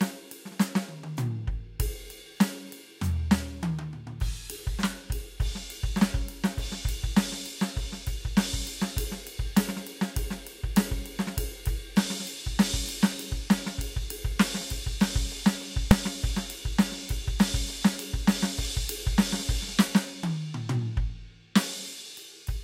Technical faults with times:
15.91 invalid numbers at full scale

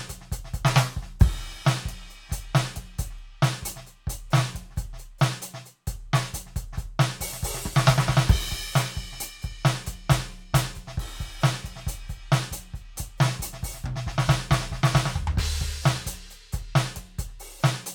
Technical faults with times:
none

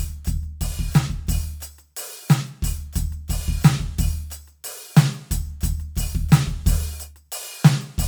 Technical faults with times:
none

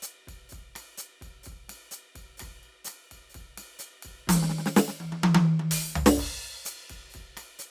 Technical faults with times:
none

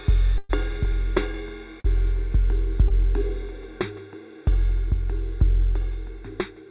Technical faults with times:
0.00-6.70 channel delay (comb filtering)
0.38-0.51 call audio freeze
1.80-1.86 short stall from a late packet
2.88-2.92 short stall from a late packet

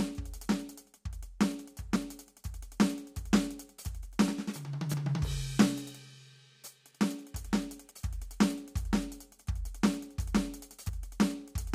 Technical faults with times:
1.96 audio missing between chunks
4.94 audio missing between chunks
10.89 audio missing between chunks

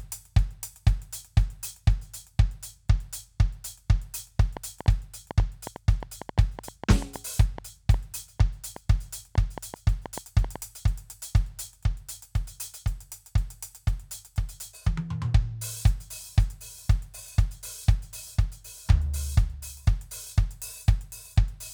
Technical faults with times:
4.40-10.57 train of clicks

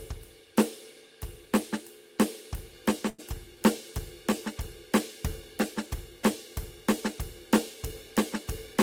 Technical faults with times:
3.09-3.20 short stall from a late packet

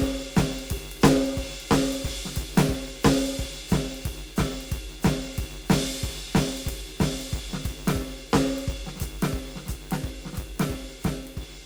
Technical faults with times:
0.00-11.66 filter restarted on every block

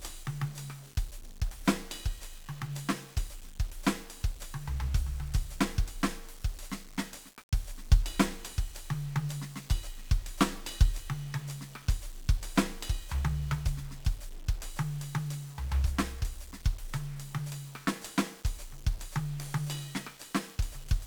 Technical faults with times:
0.00-21.07 1-bit DFPWM compression

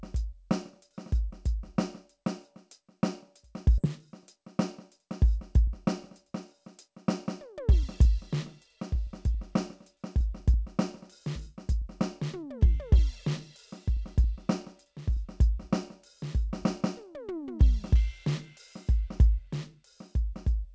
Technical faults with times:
3.78-3.80 skip ahead
5.67-10.54 jitter buffer speed-up
11.27-15.17 jitter buffer speed-up

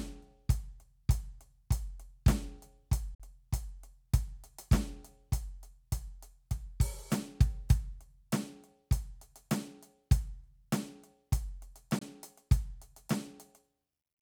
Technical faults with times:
3.14-3.20 Bluetooth dropout
11.99-12.02 Bluetooth dropout

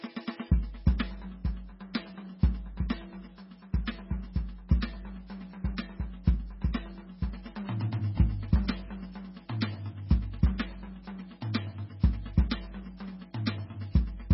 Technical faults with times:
0.00-14.34 MP3 compression

